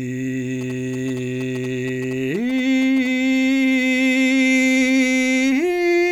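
From 0.61 s to 3.07 s, GSM signalling bursts sit over the music as a galloping dit-dit-dit of short buzzes at 217 Hz, roughly 20 dB below the music. A nearby 2G phone's signalling transmissions are being rectified by the audio circuitry.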